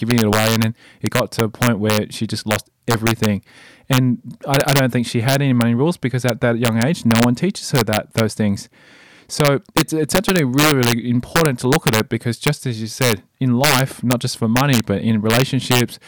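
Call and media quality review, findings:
Integer overflow across the whole speech clip: sharp cracks on loud syllables, harsher than clipping. Gain about 2 dB too hot; peaks past integer full scale wrap to opposite sign instead of saturating, roughly 0.4 percent of samples. Waveform: isolated full-range sign flips; spectrogram: broadband vertical spikes.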